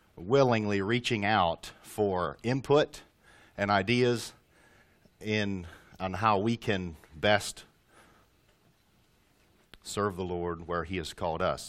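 Nothing technically wrong is audible at any point in the audio.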